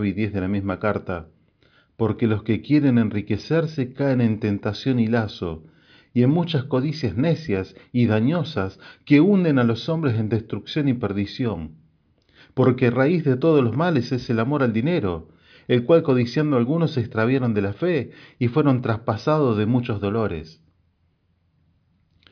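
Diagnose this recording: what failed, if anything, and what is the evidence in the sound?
Listening to the speech in this recording, nothing stood out as a failure at any stage of the chain.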